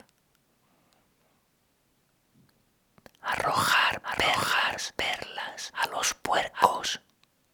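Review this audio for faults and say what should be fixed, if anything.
From 4.04 to 6.68 s a dry copy of the sound, about 5 dB quieter, trails about 0.7 s behind: a doubled audio track, likely from a second capture path. Record each source through one path only, and check edits for leftover overlapping copies.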